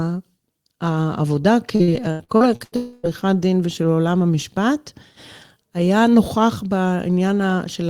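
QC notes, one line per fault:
1.75–2.75 s, repeated packet loss (robotic sound): choppy speech with pieces missing; seven gaps up to 82 ms were patched by repeating preceding audio, covering over a third of the stretch.
2.76–3.06 s, long network dropout: speech turns into a smeared, fading buzz with no silence before returning; likely a longer stretch of audio never arrived and was filled by extending the last sound.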